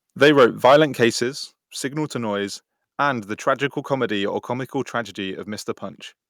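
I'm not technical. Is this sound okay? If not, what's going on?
No. From 0.22 to 1.04 s the loudest moments sound harsh and crackly, likely microphone overload: the input was set too high, so the peaks got chopped off. At 0.24 s and again at 1.23 s the whole sound suddenly drops quieter, the second time more noticeably, likely the microphone volume stepped down by the call software reacting to that overload.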